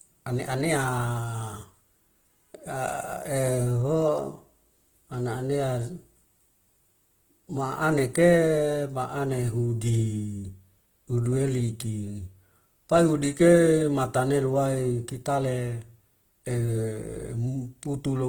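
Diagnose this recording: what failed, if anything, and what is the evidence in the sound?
The codec stage is the likely culprit: Opus compression is plainly audible throughout the speech. Tones turn grainy and rough rather than swirling, while content extends to about 20.2 kHz. This fits music-mode CELT at a low bitrate near 16 kbps, filling starved bands with folded or noise content.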